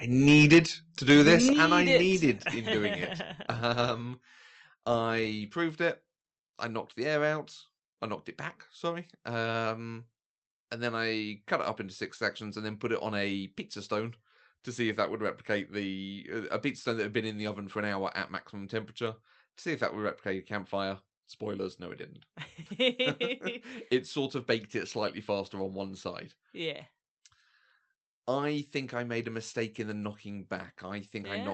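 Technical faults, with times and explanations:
0.27–0.59 s and 1.09–1.94 s, microphone overload: the loudest passages have their peaks flattened, about 8 dB over the limit in the first span with roughly 15 percent of samples clipped, then about 5 dB over with roughly 3 percent, ending just before "needed in doing it". The likely cause is input volume set too high, so the converter cuts off peak tops and adds a crackling edge.
0.54 s, 1.53 s and 2.55 s, microphone volume stepped down: the level drops abruptly, by about 2 dB, then about 6 dB, then about 4 dB, the last just before "in doing it". The first two land during the overloaded passages. The likely cause is the call software reducing the device's input volume in single steps after detecting clipping.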